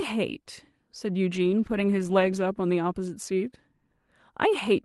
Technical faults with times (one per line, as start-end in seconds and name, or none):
1.37-2.55 call bitrate drop